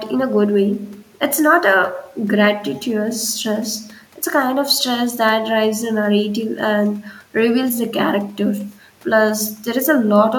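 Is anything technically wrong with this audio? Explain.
No, nothing is technically wrong with this audio.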